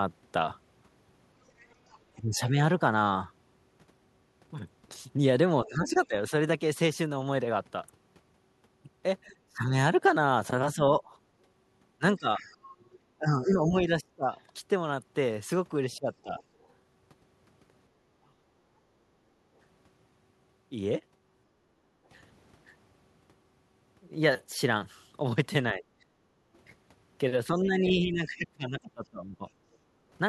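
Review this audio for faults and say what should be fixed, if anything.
A faint second voice is audible at 1.58–2.21, 5.66–6.07, 12.38–16.73 and 25.82–29.76 s, roughly 25 to 35 dB under the talker. This is likely the other side's voice leaking through, where loudspeaker echo escaped cancellation.

The talker's speech dips by up to roughly 25 dB at 2.16–2.58, 5.65–18.42 and 25.74–29.45 s. This is likely speech suppressed in double talk, with both voices turned down together.

The background is gated by the echo canceller at 18.7–22.06 s (about 8 dB) and 26.11–26.45 s (about 14 dB). The room sound drops while the loudspeaker plays.

To prevent all three, use a headset or better-tuned echo cancellation that handles double talk without heavy suppression.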